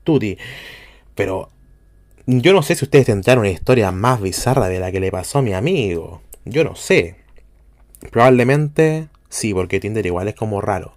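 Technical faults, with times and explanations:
Throughout, mains hum: a steady 50 Hz drone sits under the speech for the whole clip, about 35 dB down, so it's faint but always there in the pauses. That's the power line leaking into the signal, typically from a ground loop or a nearby transformer.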